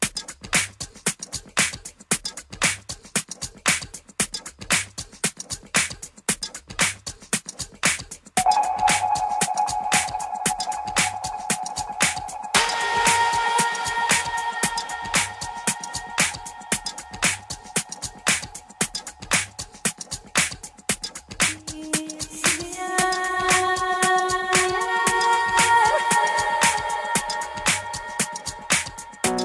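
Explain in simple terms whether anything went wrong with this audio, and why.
Nothing went wrong; no problems can be heard anywhere.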